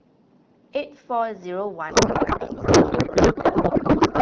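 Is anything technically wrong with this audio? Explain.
Yes. From 1.90 s to the end at 4.21 s there is a codec payload misread. The decoder unpacks AMR wideband frames with their bit fields shifted. The pattern fits octet-aligned packing being read as bandwidth-efficient. The speech turns into garbled, warbling noise that barely tracks it. On a spectrogram, harmonic structure vanishes into smeared broadband texture. The waveform loses its syllable envelope.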